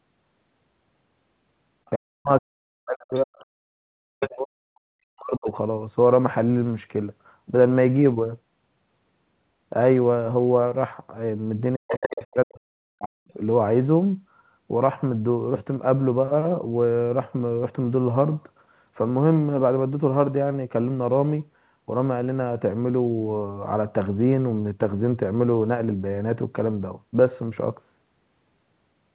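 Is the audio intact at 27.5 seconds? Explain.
Yes, the speech at 27.5 seconds is intact, with nothing there beyond the normal narrowband sound of a call path that carries nothing above 4 kHz.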